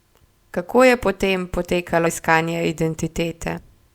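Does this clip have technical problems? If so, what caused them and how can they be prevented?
Yes. Compressed frames are skipped at 2.05 s, right after "je po tem", and again at 3.57 s. Roughly 70 ms of speech vanishes at the first point and roughly 150 ms at the second. These jumps match whole frames of about 26 ms going missing from the compressed stream, either lost from the file or rejected by the decoder as damaged. To prevent this, verify file integrity after transfer and use a container or transport with error checking and retransmission.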